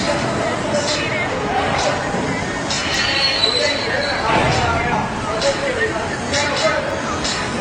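At 2.94 s, 4.92 s and from 6.91 to 6.93 s there are tiny skips caused by overlap between stream segments, spaced about 2 s apart to match a 2-second segment length. Each segment's timing claims a few milliseconds already covered by the previous one, so the player discards that stretch and the waveform jumps: about 7 ms lost twice, then 20 ms. Unlike a dropout, no silence or fill appears. The sound simply skips forward.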